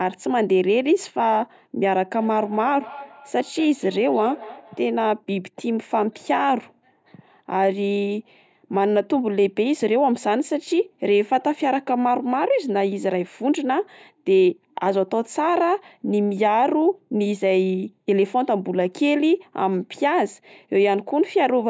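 From 2.16 to 4.91 s there is feedback echo between two devices: one device replays what the other's microphone sent, and that microphone captures it again. The speech returns roughly every fifth of a second, thinner and ringing, peaking about 18 dB below the direct speech.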